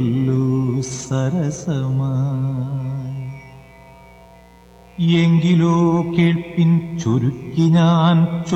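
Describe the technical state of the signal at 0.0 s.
At 0.0 s the signal already carries mains buzz, and it stays present for the whole clip rather than starting at a particular moment. The buzz is built on a 60 Hz mains frequency: sharp switching spikes, repeating twice per mains cycle, leak into the audio path, typically through a dimmer, rectifier or poor shielding. Their harmonics run up into the kHz range, giving a steady, raspy buzz that sits roughly 30 dB below the wanted sound.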